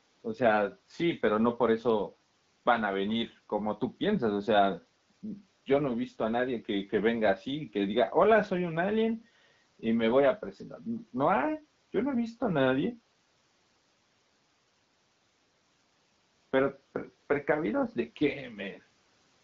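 No technical faults are present.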